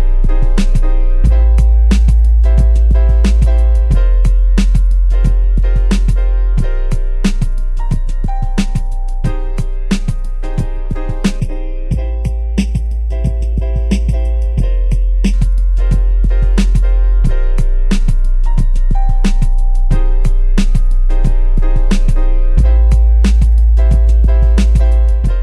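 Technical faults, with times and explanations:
11.4–15.33 s, channel delay (comb filtering): the sound turns hollow and phasey, with a fixed notch around 1.5 kHz. One channel lags the other by well under a millisecond, so when both are summed to mono, shared content cancels at evenly spaced frequencies.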